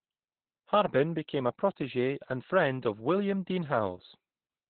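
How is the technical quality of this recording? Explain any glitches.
The quality is poor throughout. Opus voice compression running its SILK speech coder at a very low rate, around 8 kbps, narrows the band to nothing above 4.3 kHz, leaving the speech muffled, hoarse and slightly robotic.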